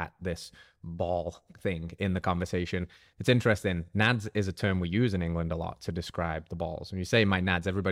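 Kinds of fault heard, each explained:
No technical faults detected in the recording.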